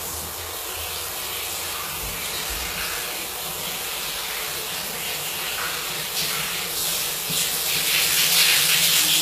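A short recording of sounds, and the whole thing carries plainly audible HE-AAC compression damage, likely from an HE-AAC v2 encode at a very low rate, something like 20 kbps. The top end is still there, but it's rebuilt rather than real: the upper bands are copied up from below and shaped loosely, so their detail doesn't line up with the lower part. That leaves the treble grainy and metallic, and nothing at all comes through above 14.9 kHz.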